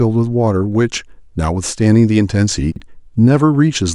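Around 2.72 to 2.80 s the speech briefly jumbles into a quick garbled stutter. These are chunks out of order: a 40 ms chunk came one chunk late and played after the one meant to follow it. Nothing is lost, but the swap leaves three hard joins.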